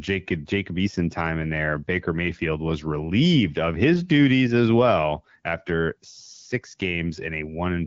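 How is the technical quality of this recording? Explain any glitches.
No technical faults are audible.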